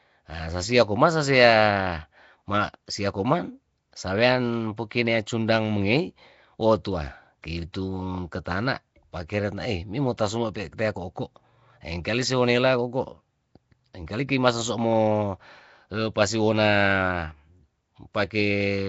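Nellymoser compression runs throughout, heard as a rough, hissy halo and a smeared, underwater quality on the speech, with nothing above 7.7 kHz. The likely cause is Flash's Nellymoser Asao codec at a low rate, perhaps around 32 kbps, which codes short blocks with a fixed small bit budget and fills starved bands with noise.

Pre-echo appears at 10.17 s, just after "ketana pakeren nae mimo". A sharp attack sat late in a transform block, so noise sized for the loud onset also filled the quiet moment before it, a brief hiss of about 12 ms that leaves the attack soft and smeared.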